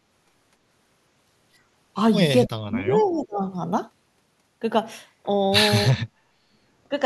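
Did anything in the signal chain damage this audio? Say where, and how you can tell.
Yes. In call processing, the echo canceller likely mistook double talk for echo, causing speech suppressed in double talk: the voice drops around 40 dB from 2.46 to 3.43 s, and around 25 dB at 5.87–6.03 s.

The far end's canceller likely left residue, causing an echo leak: a faint copy, about 25 dB below the speech and delayed 296 ms, surfaces at 3.09–3.15 s.

There is also background gated by the echo canceller: it clamped the microphone while the loudspeaker played, so the room sound dips about 7 dB from 6.31 to 6.51 s.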